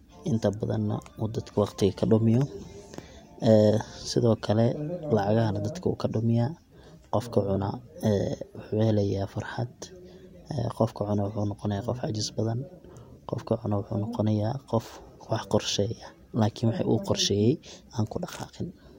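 No technical faults can be heard anywhere in the speech.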